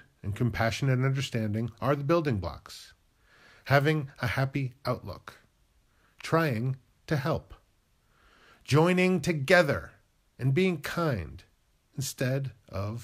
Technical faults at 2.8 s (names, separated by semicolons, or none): none